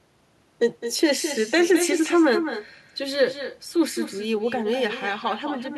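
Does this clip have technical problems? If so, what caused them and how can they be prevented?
Yes: throughout the speech, every phrase is shadowed about a fifth of a second later by a thinner copy roughly 9 dB quieter. This is echo with no canceller: the far end's loudspeaker feeds its microphone and the sound returns. Enabling acoustic echo cancellation or using headphones at that end prevents it.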